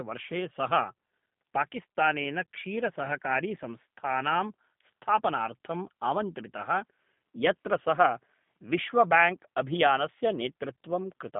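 From start to finish the speech runs through the G.729 codec at 8 kbit/s, band-limited to 150 Hz–3.6 kHz, rebuilt from a few pulses per frame, sounding rough and synthetic.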